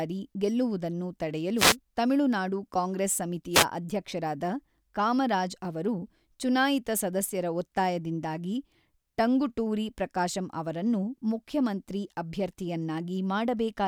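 The radio link from an analogue FM wireless microphone fades as reflected signals cancel, causing two wireless microphone noise hits in this speech recording. As the signal strength drops, receiver noise rises for a moment. This is heard as brief bursts of static swish, the first from 1.56 to 1.76 s and the second, shorter, from 3.53 to 3.65 s.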